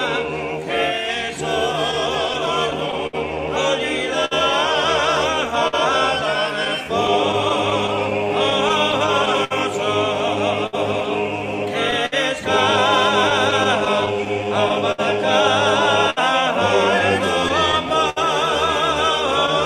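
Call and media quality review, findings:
Clock drift between sender and receiver, whole clip: sender clock running roughly 5% slow against the receiver. Jitter buffer repeatedly drains, forcing the receiver to pad and stretch. Waveform shows small irregular discontinuities throughout. Spectrogram shows faint vertical seams at uneven spacing rather than a periodic pattern. Small timing hiccups recur throughout at uneven intervals.

Repeated timing corrections, 0.60 to 17.88 s: receiver playout slowed to about 99% speed, with roughly 100 ms added in total through short repeated or stretched pieces. All edits go the same direction, lengthening the audio. Spacing is uneven. Waveform shows brief duplicated cycles at the splice points. Spectrogram shows slightly smeared onsets and narrow seams at each edit.

Scattered short gaps, 1.91 to 19.50 s: about 40 lost or late packets, isolated from one another. 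Each was concealed by extending the preceding sound, totalling around one second, roughly 5% of the span. The longest patch is about 70 ms. Heard as ticks and brief smears. Spectrogram shows short horizontally stretched, frozen-looking patches. Waveform shows repeated periods and small envelope steps at the patch edges.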